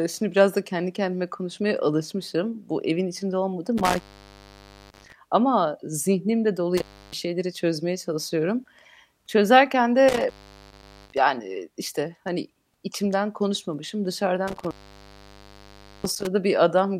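Intermittent contact occurs at 3.78–5.13 s, 6.77–7.14 s, 10.08–11.18 s and 14.48–16.27 s. A loose connection briefly opens the line. The speech drops out for 0.91, 0.31, 0.76 and 1.33 s, with crackle at each break and faint hiss in the gaps.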